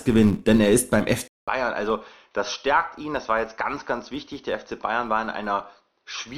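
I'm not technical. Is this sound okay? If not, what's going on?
No. All the way through there is a steady buzz that rises and falls with the speech, like fast ticking at 200 times a second. This is a filter restarted on every block: a processing step forgets where it was and restarts every 5 milliseconds, clicking each time.

At 1.28 s the sound drops out for about 0.2 s, then returns duller, slightly quieter and with faint new background hiss, to the end. The likely cause is the input switched to a poorer device, such as another microphone.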